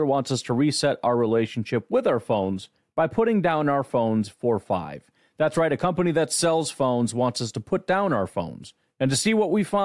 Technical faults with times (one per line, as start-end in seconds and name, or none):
none